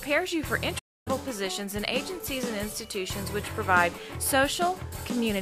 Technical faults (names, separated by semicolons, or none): playback stall